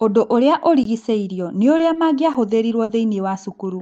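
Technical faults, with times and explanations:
0.84 s and 2.34 s, block of digital silence: the output drops to zero and back with no fade, leaving about 18 ms and 11 ms holes. The second, being under 15 ms, is heard as a tick. The second gap fits a 512-sample buffer not being filled in time.
1.77–1.81 s and 1.93–1.97 s, short concealed packet loss: about 20 ms of audio is missing in each span. The receiver extends the preceding sound, then crossfades back into the real signal, which comes across as a brief smear or wobble.
2.83–2.91 s, burst of packet loss: about 60 ms never arrives in time to be played. The receiver stretches the last sound and fades it down, which yields a held buzz or decaying hiss, then playback resumes later with that stretch absent.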